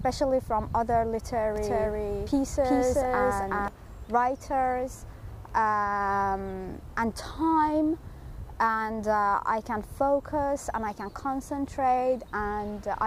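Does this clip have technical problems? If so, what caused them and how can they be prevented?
Yes. From 1.56 to 3.68 s the sound is doubled: an equally loud full-band copy trails about 0.4 s behind, with no decay or room colour, and it starts and stops abruptly. This doubled audio track likely comes from a second, slower capture path or an edit holding two out-of-step copies. To prevent it, record each source through a single path and check edits for overlapping duplicate regions.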